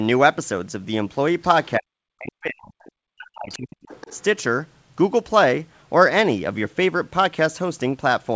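Faint scraps of a second voice, the other side's voice leaking through, appear at 1.64, 2.85 and 3.5 s, and a longer stretch runs from 3.83 to 4.23 s. Each is a little louder than the last. It is a separate voice layered on top, not a dropout, which points to residual loudspeaker echo.

Between these, from 1.79 to 2.84 s and from 3.1 to 3.88 s, the speech itself is suppressed in double talk. The main voice dips sharply, at worst by around 40 dB. This is likely the echo canceller ducking everything while both sides talk. Unlike a network dropout, it comes while the far end is playing on the loudspeaker.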